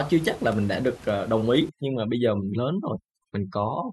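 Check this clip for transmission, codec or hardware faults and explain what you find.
One fault is present, overdone noise removal, from 1.69 s to the end of the clip at 3.93 s. Before that point, room noise sits about 22 dB below the speech. From 1.69 s a noise reduction stage acts far too hard. It pulls individual frequency bands down or shuts them off whenever they come close to its noise estimate. Quiet parts of the speech fall below that line and vanish too. The background drops and breaks up into twinkling specks.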